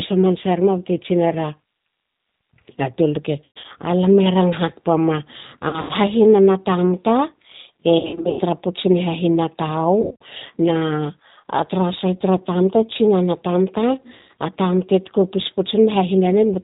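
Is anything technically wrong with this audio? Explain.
Yes. The whole clip carries plainly audible G.729 codec damage. At 8 kbit/s the speech is rebuilt from a vocal tract filter, a pitch predictor and a few pulses per frame, so it sounds rough and slightly synthetic. A spectrogram shows a hard ceiling at 4 kHz.

VoIP packet loss concealed by the speech codec strikes at 3.44–3.65 s, 5.69–5.92 s, 7.99–8.43 s, 10.01–10.22 s and 14.15–14.30 s. Between 120 and 280 ms goes missing each time, in runs of up to 140 ms. The decoder stretches its last pitch and filter into a fading buzz or coloured noise. On a spectrogram this appears as flat, smeared harmonics, and the waveform envelope decays through each gap.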